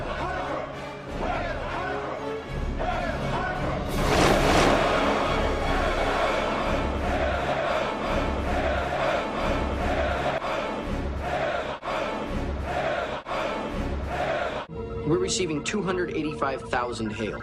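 From 3.98 s to 10.38 s the audio carries a doubled audio track: a second full-band copy trails the original by around 400 ms at roughly equal loudness, likely from the signal being captured again through a slower path. It is not an echo or reverberation. There is a single repeat with no decay tail and no room colouring, and the copy cuts in and out abruptly at those two times rather than fading.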